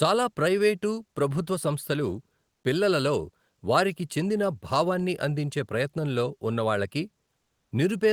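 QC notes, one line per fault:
7.41–7.71 s, comfort noise in place of the background: for 300 ms in a pause, the faint background, sitting about 52 dB below the loudest speech, gives way to a smooth, even hiss with none of its former texture, about 1 dB quieter than before. The likely cause is discontinuous transmission in an Opus link. The sender's voice detector judged the gap silent and stopped sending audio, so the receiver filled it with synthetic noise shaped to approximate the background spectrum.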